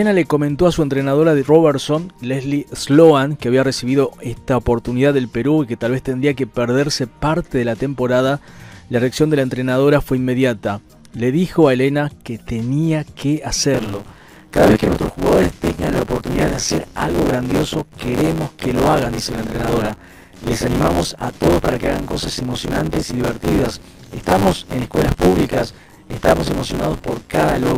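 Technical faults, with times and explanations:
13.74 to 27.78 s, buffer tearing: from here on there's a steady robotic rattle at about 93.8 Hz, which fits a 512-sample buffer. Writer and reader have slipped, so most of each buffer replays audio from around 30 ms earlier, with hard joins at the buffer rate.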